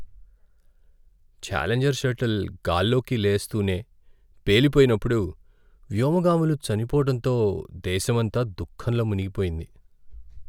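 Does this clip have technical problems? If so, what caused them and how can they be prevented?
No, there are no technical problems to report here.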